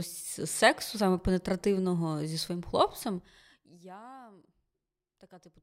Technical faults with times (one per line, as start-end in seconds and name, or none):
3.00-3.88 zipper noise